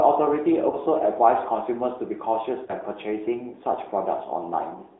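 Throughout, the speech carries the AMR narrowband mobile codec sound. The line passes only about 250 Hz to 3.7 kHz, so sibilants lose their top and the low end is thin. Unlike simple band-limiting, the voice is rebuilt from a vocal tract model driven by sparse pulses, which gives a plainly audible buzzy, synthetic edge. The degree of that edge fits a mid-range mode around 10.2 kbps.

From 0.70 to 0.77 s, and again from 2.66 to 2.71 s, there are lost AMR speech frames. Each is a single 20 ms frame that failed its check. The decoder filled it by repeating the previous pitch and vocal tract settings at reduced gain, so you hear a brief dip or warble rather than a hard gap of silence or a click. This is what separates it from a plain dropout. The voice then resumes weak or rough for a moment.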